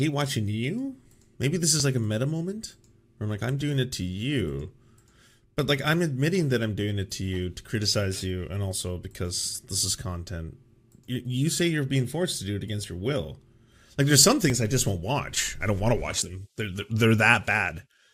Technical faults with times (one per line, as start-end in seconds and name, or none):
1.80 dropped buffer (overrun)
12.84 dropped buffer (overrun)
14.50 dropped buffer (overrun)
16.22 dropped buffer (overrun)